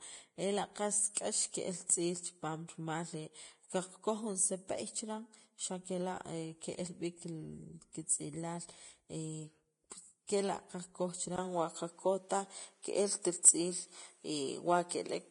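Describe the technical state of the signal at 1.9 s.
Pre-echo runs from 1.86 to 1.90 s: codec noise smeared about 31 ms ahead of an attack gives a brief hiss, visible as a noise wash before the onset. Underneath, heavy Vorbis compression is the likely cause of the grainy, hissy treble. The spectrogram shows nothing above 10.6 kHz, which points to a low bitrate around 31 kbps.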